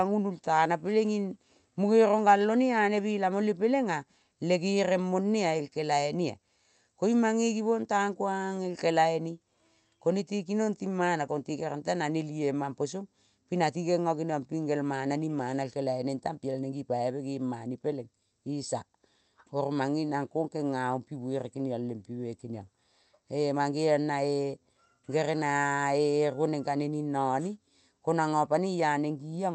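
The speech comes through a call codec and jitter buffer working as intended, with its top end stopping at about 8 kHz and no technical faults anywhere in the signal.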